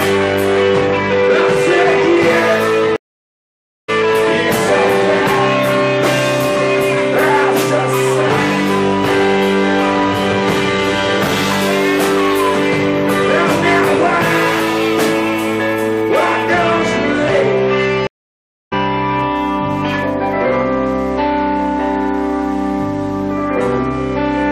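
At 2.96 s the audio drops out for 0.92 s, returning at 3.90 s, and at 18.07 s it drops out again for 0.65 s, returning at 18.73 s. Both are stream reconnects: the connection broke, playback went silent, and a fresh decoder restarted mid-stream. The material resumes further along rather than where it stopped, skipping roughly a second at the first break and roughly 0.7 s at the second.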